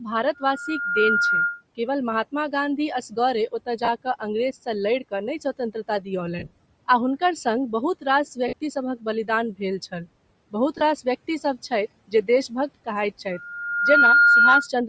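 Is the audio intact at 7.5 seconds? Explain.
No, the damage runs the whole clip, including 7.5 s: a breathy, grainy edge, likely from Bluetooth LC3 compression at a low bitrate, which zeroes the upper spectrum and fills it with noise.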